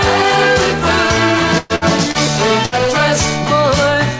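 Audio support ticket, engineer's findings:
Burst of packet loss at 1.58–1.73 s, 1.76–1.84 s and 2.65–2.75 s: jitter buffer concealment stretches the last sound into a fading buzz or hiss, then audio skips ahead, about 120 ms, 60 ms and 60 ms missing.

Short concealed packet loss at 2.11–2.17 s: about 30 ms never reached the decoder; the gap was filled by extrapolation and blended back, giving a brief smear. Band limit at 8 kHz, consistent with G.722 on the call path.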